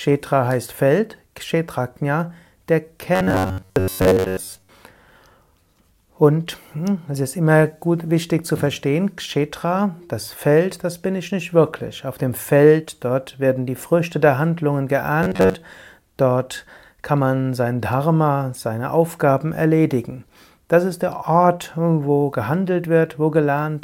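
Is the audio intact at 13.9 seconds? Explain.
Yes, at 13.9 seconds the audio is intact, with no dropout, click, distortion or other fault.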